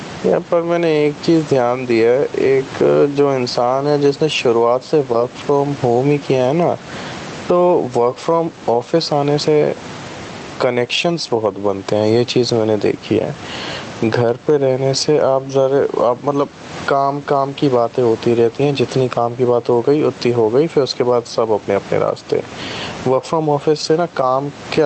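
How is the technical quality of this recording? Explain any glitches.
The recording suffers from gain pumping throughout. The gain swings by around 15 dB. A fast limiter likely clamps an input gain set far too high, squashing loud and soft passages together.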